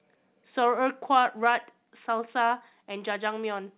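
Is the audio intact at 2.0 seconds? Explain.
No. At 2.04 s the whole signal, speech and background together, drops by about 2 dB in a single step and stays at the lower level. The likely cause is a microphone volume stepped down, with the call software cutting the device's input gain at once. Unlike a dropout, nothing goes silent, and unlike a gradual gain ride, there is no slow fade. The call codec's band limit at 4 kHz is present throughout and doesn't change at that point.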